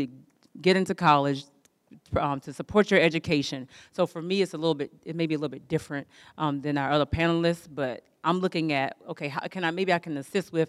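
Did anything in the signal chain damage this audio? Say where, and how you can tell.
No, nothing in this speech recording stood out on listening as damage from any stage of the signal chain.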